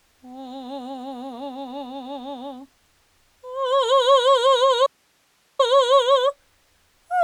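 At 4.87 s the music drops out abruptly, returning at 5.59 s. For about 0.73 s only hiss remains, roughly 45 dB below the music. This is an audio dropout to a faint residue. The signal was likely lost upstream while the later path stayed live.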